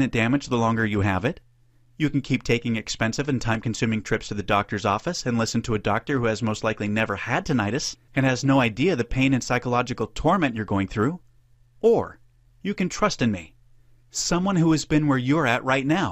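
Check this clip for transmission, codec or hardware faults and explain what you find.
One fault is audible. A repeated buffer at 3.55 s: a buffer of about 1.5 ms, which fits a 64-sample buffer, played once more when fresh audio arrived late, giving a brief click.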